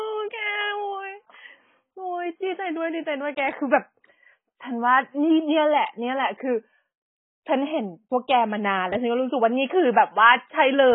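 From start to finish, the speech carries AAC compression damage, likely from a very low bitrate. Nothing sounds above about 3.7 kHz. The encoder has dropped the upper bands and starved the rest. The sound is dull and smeared. Sibilants and sustained sounds warble and fizz.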